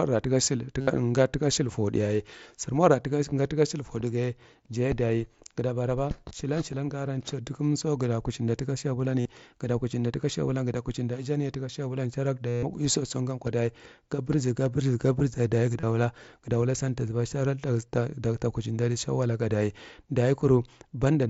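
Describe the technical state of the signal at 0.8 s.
At 0.81 to 0.88 s, concealed Bluetooth headset packet loss fills a 67.5 ms gap, which fits a run of about nine lost packets. The receiver patches the hole by repeating the best-matching stretch of the preceding 20 ms or so, giving a buzzy tone held at full level and a slight warble when real speech resumes. The waveform shows identical cycles at constant amplitude, and the spectrogram shows flat, evenly spaced horizontal harmonic lines below the mSBC 8 kHz ceiling.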